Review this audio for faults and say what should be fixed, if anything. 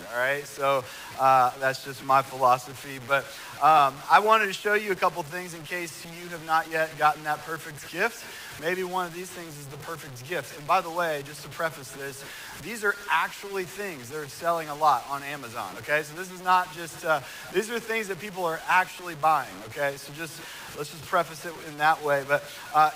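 Grainy distortion runs throughout, sitting roughly 20 dB below the sound and tracking its level. Quiet sounds turn gritty. This is likely low bit depth without dither, consistent with about 6-bit truncation. Unlike a steady dithered hiss, this error follows the signal. Prevent it by keeping adequate bit depth and applying dither whenever reducing word length.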